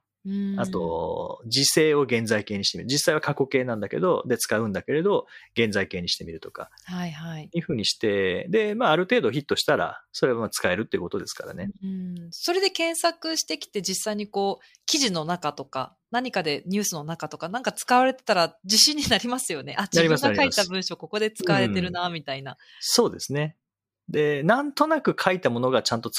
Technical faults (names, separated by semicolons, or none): none